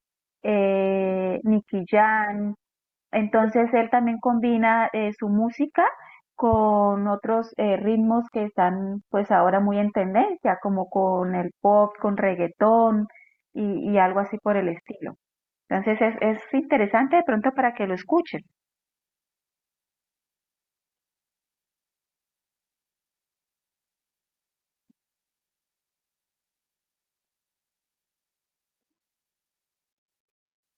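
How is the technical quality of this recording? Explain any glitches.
There is one audible glitch in the speech. Corrupt frame decoded, 16.18 to 16.20 s: a single damaged compressed frame was decoded anyway, scattering energy to wrong frequencies, heard as a short blip peaking around -25 dBFS.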